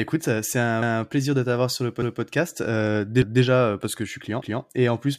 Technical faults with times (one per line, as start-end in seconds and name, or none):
0.82-1.02 overlapping chunks
3.22-3.42 overlapping chunks
4.42-4.62 overlapping chunks